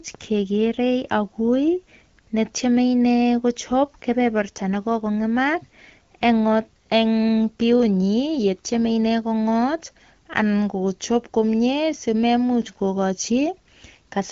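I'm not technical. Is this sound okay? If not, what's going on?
Yes, this speech sounds fine; nothing here is wrong.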